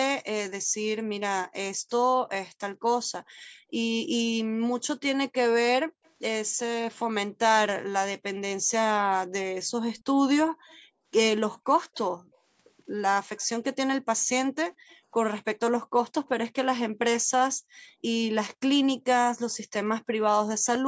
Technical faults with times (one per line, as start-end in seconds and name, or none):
0.64-6.04 background gated by the echo canceller
6.05-6.10 echo leak
9.96-16.28 echo leak
10.53-12.44 background gated by the echo canceller
14.76-15.94 background gated by the echo canceller
17.56-17.75 background gated by the echo canceller
19.61-19.72 background gated by the echo canceller